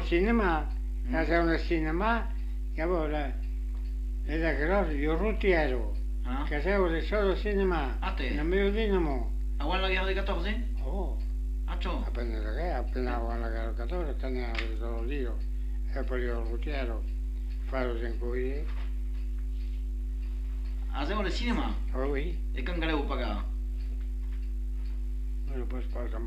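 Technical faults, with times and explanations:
No technical faults are audible.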